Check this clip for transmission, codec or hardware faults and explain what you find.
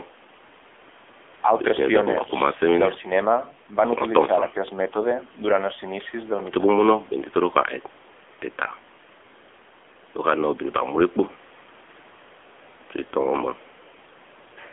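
The audio has one fault, present for its whole length: the AMR narrowband mobile codec. The speech was squeezed into 8 kHz mobile coding, which keeps only a filter model of the vocal tract plus a few excitation pulses per 5 ms. The passband runs about 250 Hz to 3.5 kHz, with nothing above 3.7 kHz. The plainly audible buzzy, synthetic texture points to a low mode near 8 kbps. A spectrogram shows a flat ceiling at 3.7 kHz and a thinned floor below 250 Hz.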